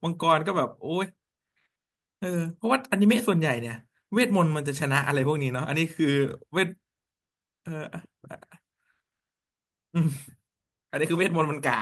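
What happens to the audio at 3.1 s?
Nothing goes wrong at 3.1 s: the speech carries on intact through that moment, with no dropout, click, distortion or other fault.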